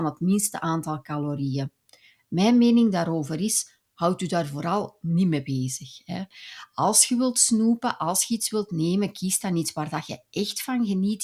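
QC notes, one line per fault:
No technical faults are audible in the speech signal at any point in the clip.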